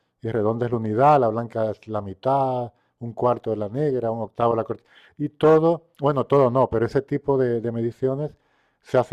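Speech recording with no technical faults to report.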